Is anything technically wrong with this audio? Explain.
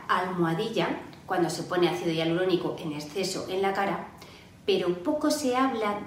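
No, nothing here sounds technically off, so there's nothing to flag in this audio.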